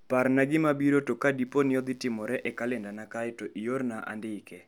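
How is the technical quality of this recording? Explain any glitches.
The recording has one clear glitch: a burst of mains buzz. From 1.46 to 2.96 s, just before "kae to", a raspy 60 Hz buzz sits well beneath the speech. Sharp switching spikes, twice per mains cycle, spray harmonics into kHz territory. That makes it rasp rather than hum.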